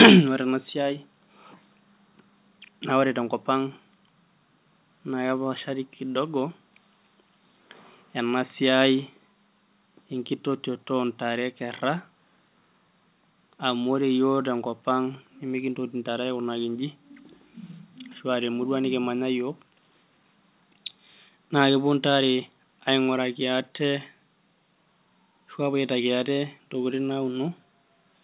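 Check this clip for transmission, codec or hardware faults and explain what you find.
Nothing here needs flagging, since the audio just sounds like an ordinary phone call with nothing above about 4 kHz, which fits a G.711 mu-law link at 64 kbps.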